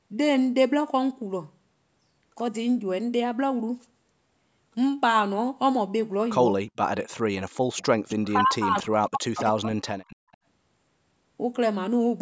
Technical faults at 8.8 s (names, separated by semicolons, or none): speech suppressed in double talk